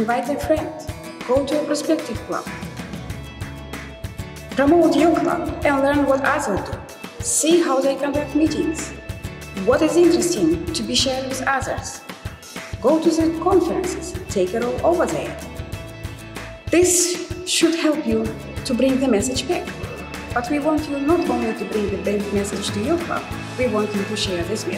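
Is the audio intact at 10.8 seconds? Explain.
Yes, the audio at 10.8 seconds is intact, with no dropout, click, distortion or other fault at that moment.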